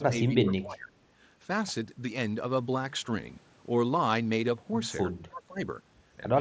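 From 0.0 to 0.94 s, and again from 5.12 to 5.6 s, the speech sinks by as much as about 20 dB. It's likely speech suppressed in double talk, with the echo canceller ducking the near talker while the far side was speaking too.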